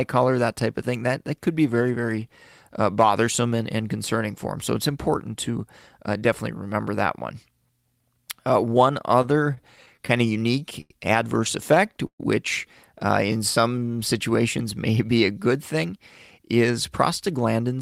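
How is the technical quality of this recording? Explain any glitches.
The recording has timing glitches from network delivery problems. It stutters twice, then drags briefly, then rushes near the end.

Repeated stalls (stutter) occur from 9.22 to 10.91 s and from 11.75 to 12.21 s. Packets arrived late, so the playback buffer kept running dry. The receiver stretched the last sound to fill each gap: 15 gaps first, then 4. The longest fills last 94 ms and 131 ms. Nothing is lost, but the speech catches and drags.

A jitter buffer slow-down follows from 13.26 to 13.91 s. The buffer needed a reserve. The receiver repeated pitch periods, adding 78 ms. Speech plays at 89% speed with unchanged pitch, so sounds come out drawn-out.

A jitter buffer speed-up runs from 15.74 to 17.78 s, just after "may be a good". Too much audio had built up. The receiver cut roughly 150 ms in tiny pieces. Speech runs at 107% speed at the same pitch and sounds slightly hurried.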